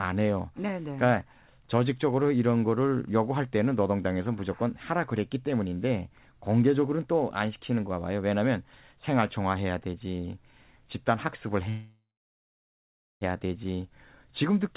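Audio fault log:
11.69–13.24 s, call audio freeze: the speech halts, the last sound fades as a brief buzz or hiss, then about 1.2 s of silence before it resumes where it stopped. This is likely held-up packets emptying the jitter buffer. Nothing is lost, but later audio arrives 1.52 s late.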